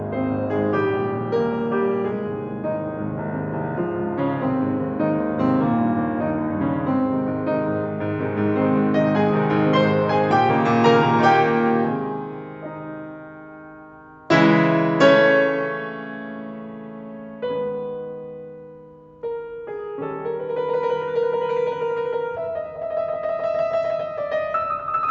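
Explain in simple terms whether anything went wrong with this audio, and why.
Nothing went wrong with this music: it has passed through a call's microphone processing and codec, which keep everything below 8 kHz, just as an ordinary call would.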